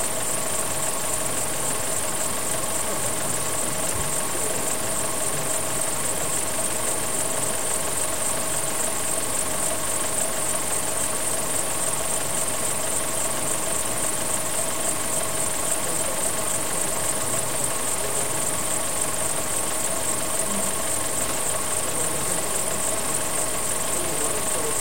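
From start to finish, the sound is coarse and grainy. The grit rises and falls with the material instead of sitting underneath it as a steady hiss. Quiet passages suffer most. They turn rough and sputtery, and the faintest parts collapse to silence. The distortion sits only about 10 dB below the signal. The likely cause is low bit depth without dither. The audio was truncated to around 4 bits, leaving very few levels, and the rounding error tracks the sound itself.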